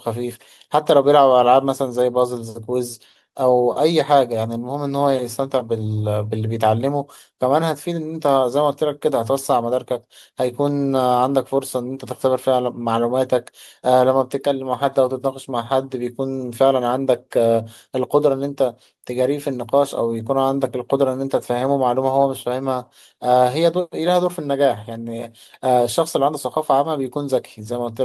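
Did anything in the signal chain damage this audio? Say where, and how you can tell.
No, nothing in the signal chain has audibly damaged this speech recording, and the signal holds steady and continuous at every stage, with nothing added, lost or altered along the way.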